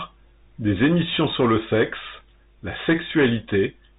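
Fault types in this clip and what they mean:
Bluetooth CVSD headset codec: the speech has come through the narrowband headset link, where each sample is coded as a single up-or-down bit at 64 kHz with an adapting step size. Here nothing survives above about 3.8 kHz, so the top end is gone and s sounds come out scratchy. Louder high-frequency passages outrun the step and distort, and a granular hiss sits under the speech throughout. The damage is plainly audible.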